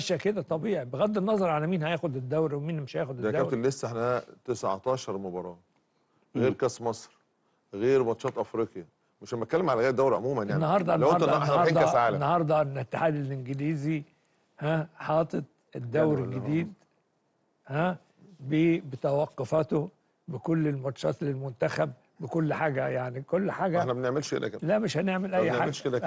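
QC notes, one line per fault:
Nothing in this one caught my ear as a fault, so there's nothing to log here.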